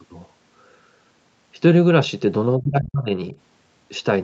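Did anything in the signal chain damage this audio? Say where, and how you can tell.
Yes, in the call processing. From 2.57 to 3.1 s the speech sinks hard, by something like 30 dB at its worst, for about half a second. There's a brief, much shallower dip of a few dB from 3.29 to 3.35 s. That pattern is most likely speech suppressed in double talk: the echo canceller heard both ends at once, couldn't separate its own talker from the loudspeaker echo, and pulled this side down. The 8 kHz top end is just the Opus call path's bandwidth.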